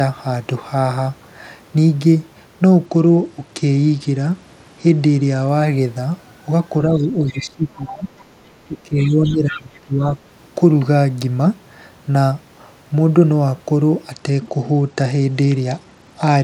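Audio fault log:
2.86–5.49 s and 14.11–16.43 s, Bluetooth SBC bit pool drop: treble dulls and gritty quantisation noise rises, which fits the bit pool falling from 31 to 12, about 88 kbps. Unlike echo suppression, the level stays steady.
6.89–8.09 s and 8.68–10.18 s, speech suppressed in double talk: the voice dips by roughly 15 to 20 dB for about 1 to 1.5 s each time, likely the echo canceller ducking both talkers.
6.98–7.04 s, 7.28–7.40 s, 9.24–9.33 s and 9.50–9.80 s, other side's voice leaking through: scraps of a second voice, roughly 15 to 30 dB below the talker, likely loudspeaker echo left in the microphone.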